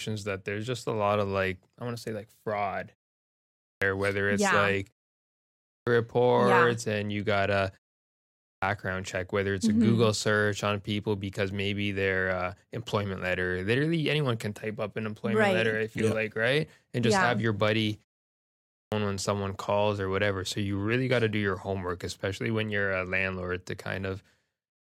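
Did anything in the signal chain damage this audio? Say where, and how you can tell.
Yes: clipped start after a pause, at the playback stage. At 3.23, 5.3, 8.08 and 18.3 s, 0.54–0.62 s of sound after each pause is swallowed while the sleeping output wakes.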